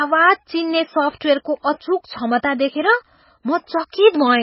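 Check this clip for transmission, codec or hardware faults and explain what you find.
One codec fault runs through the whole clip. MP3 compression, throughout: the speech has nothing above 5.6 kHz, and the heavy damage fits a likely 16 kbps encode. Starved of bits, the encoder zeroes weak frequency lines that flicker between frames, giving a watery, swirly sound, metallic chirps on s sounds and smeared attacks.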